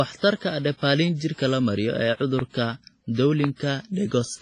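Throughout the speech there is heavy damage that likely comes from WMA compression at a low bitrate, around 24 kbps. Its long transform blocks smear quantisation noise over tens of milliseconds, so the sound rings and washes with a breathing hiss. On a spectrogram, nothing appears above 10.5 kHz.

At 2.39–2.41 s and again at 3.44–3.46 s, a loud pop sits on top of the speech, which carries on beneath it. Each is a single pop, likely a sudden voltage pulse shaped by the circuits after it. Each shows as a narrow spike roughly 15 dB above the surrounding waveform and a thin full-height vertical line on a spectrogram.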